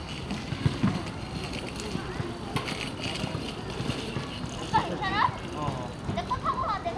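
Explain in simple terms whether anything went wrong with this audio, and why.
Nothing went wrong with this audio, so there is no fault to explain.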